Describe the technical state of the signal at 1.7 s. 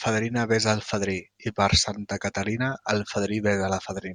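At 1.7 s the speech signal is intact, with no audible dropout, distortion, glitch or other fault at that point.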